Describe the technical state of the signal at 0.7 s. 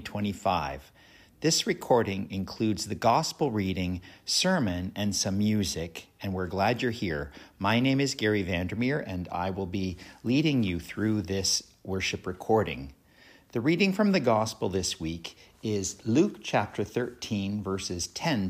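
At 0.7 s the signal is intact, with no audible fault at that point.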